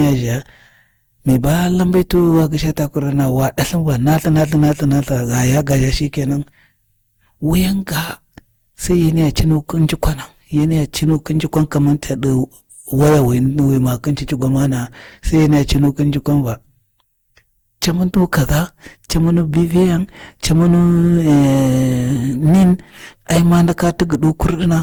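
Hard clipping runs through the whole speech recording, from start to finish. The signal was pushed about 12 dB beyond what one stage in the chain could pass, so every peak was sliced flat at that ceiling, with roughly one sample in twenty-five affected. Those squared-off tops add a spray of high harmonics, so each loud syllable comes with a harsh, gritty fuzz rather than occasional crackle.

Generation loss is also present throughout, heard as a swirling, hollow smear over the speech, with consonant onsets blurred and softened. The likely cause is repeated lossy coding, something like seven successive decode-and-encode passes through a codec that fits Opus at about 64 kbit/s. Each pass requantises on a shifted frame grid, so noise piles up beyond what one encode at that rate would leave. Content still reaches about 20.2 kHz.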